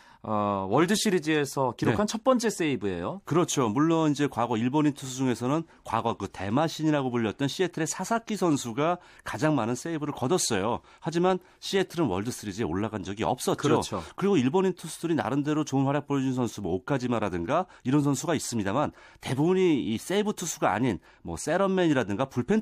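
Listening through the speech recording, nothing technical stood out as wrong at any point.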